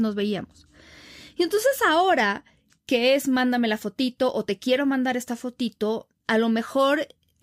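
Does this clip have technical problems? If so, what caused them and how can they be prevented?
No, I hear no technical problems anywhere in it.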